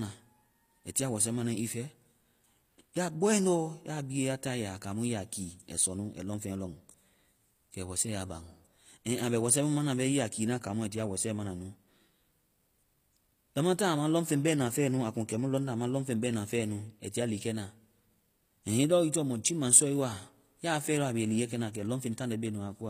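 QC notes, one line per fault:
Throughout, HE-AAC compression: s sounds are gritty and metallic with nothing above 15.5 kHz, likely from treble rebuilt by band replication, which fits a low bitrate near 24 kbps.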